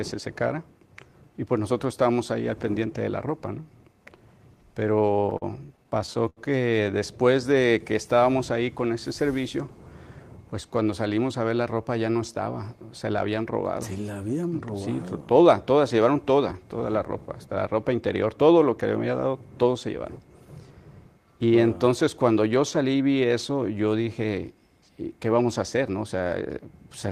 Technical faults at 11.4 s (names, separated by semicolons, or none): none